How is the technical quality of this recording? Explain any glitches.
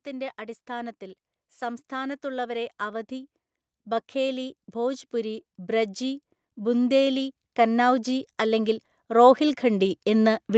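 The recording has one clear fault: automatic gain rising. It starts at 1.59 s and continues to the end of the clip. The automatic gain control judged the input too quiet and kept raising its gain step by step. Speech and background noise swell together, so the whole sound grows louder. The rise is slow and steady rather than a jump. The audio also shows the call path. Nothing sits above 8 kHz, which fits Opus coding at a modest bitrate, about 32 kbps.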